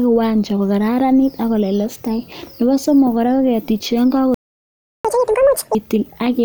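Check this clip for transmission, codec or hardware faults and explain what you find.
Two faults occur, both near the end of the speech.

A playback stall runs from 4.34 to 5.05 s. The audio stops mid-flow for about 0.7 s. The player likely ran out of buffered data or had its thread blocked. Output stayed silent until it recovered.

Catch-up at higher speed follows from 5.05 to 5.75 s. The player resamples its backlog at 2.0 times normal speed to win back the lost time. The speech sounds hurried and raised in pitch, by around ten semitones, then returns to normal.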